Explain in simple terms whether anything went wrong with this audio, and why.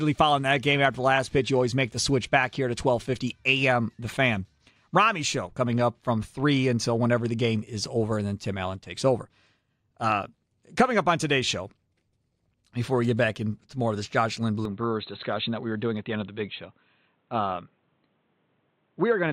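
At 14.65 s the speech suddenly turns dull and boxy, and it stays that way to the end. This sounds like an input switched to a poorer device. The recording likely moved to a different microphone or to a headset's call mode. That device drops everything above about 4.1 kHz, so the crisp top end vanishes. The loudness stays the same and there is no gap at the change. A faint new background noise arrives with it.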